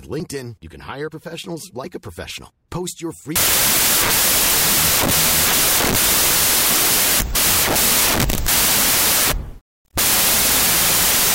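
From 3.36 s to the end, starting just before "furniture company known for", the data behave as if written as 32-bit integers but read as 16-bit, a wrong sample width. Each sample splits into two values. Only the upper halves keep the speech's top bits, while the lower halves turn into loud noise. The doubled sample count plays everything at half speed, an octave lower, with the speech buried under the noise.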